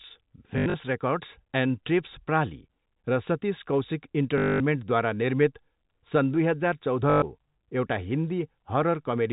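Packet loss with the last packet repeated hits at 0.58 to 0.74 s, just before "रेकर्ड्स एन्ड टेप्स", where 120 ms goes missing in scattered bursts up to 80 ms long. It returns at 4.38 to 4.6 s, after "र सतिस कौसिक", and at 7.1 to 7.22 s. Each gap is filled by replaying the last received chunk of the telephone-band signal. The repeats seldom line up with the pitch, and the fill buzzes at about 50 Hz, consistent with 20 ms packets. The result is a brief robotic stutter, longest in the middle event.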